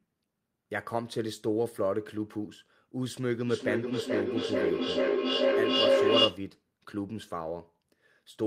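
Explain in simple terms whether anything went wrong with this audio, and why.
From about 3.5 to 6.5 seconds there is feedback echo between two devices: one device's speaker replays the other's microphone, and that microphone picks it up again. The sound returns about every 0.4 seconds, piling up louder than the speech itself instead of fading.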